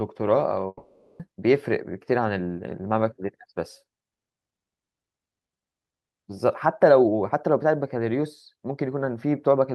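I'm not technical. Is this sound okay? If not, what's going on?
No. From about 0.67 to 1.21 seconds, there's what sounds like a long network dropout: the audio most likely stopped arriving for about half a second. The receiver tried to cover the gap by stretching out the last bit of speech it had, so you hear a smeared, fading buzz rather than the real speech, then a very brief silence. The speech then picks up again, but that half-second is simply gone.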